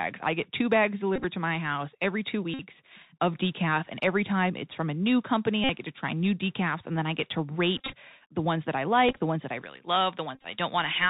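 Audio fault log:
Throughout: Bluetooth CVSD headset codec. The sound has passed through the narrowband headset codec, which sends one up-or-down bit per sample at 64 kHz and adapts its step size. The damage is plainly audible: nothing survives above 4 kHz, sibilants turn scratchy, and a granular hiss sits under the speech. On a spectrogram there is a hard ceiling at 4 kHz over a speckled noise floor. The waveform shows slope-limited, staircase-like edges where loud, fast changes outrun the step size.
1.16–1.24 s, 2.54–2.61 s, 5.64–5.69 s (after "from a new company", before "get to try new"), 7.77–7.93 s, 9.09–9.19 s (between "the ones that I" and "the ones that I"), 10.35–10.46 s: Bluetooth headset packet repeated. In each burst, lost voice packets were replaced by replaying the previous packet's bits. About 50 ms was lost in most bursts, about 68 ms at 10.35 s and about 100 ms at 7.77 s, in runs of up to about 20 ms. 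Repeating every 3.75 ms gives a short, steady buzz near 267 Hz. A spectrogram shows evenly spaced horizontal harmonic stripes at multiples of 267 Hz. The waveform shows an identical short segment tiled over and over.
9.63–11.09 s: pre-emphasis left on. From just after "the ones that I" to the end, a treble boost was applied and never undone. It matches a J.17 curve, about 11 dB up at 10 kHz relative to 1 kHz. The ending sounds thin, bright and hissy-sibilant. On a spectrogram the upper bands turn abruptly brighter from 9.63 s while the lows stay unchanged. The waveform looks spikier, with sharper, more prominent high-frequency detail riding on each syllable.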